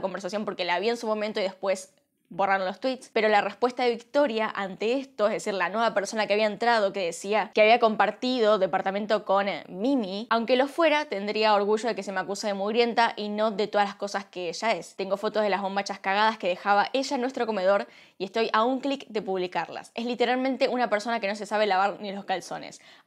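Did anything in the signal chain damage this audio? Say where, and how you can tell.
No, nothing in the chain audibly damaged this audio.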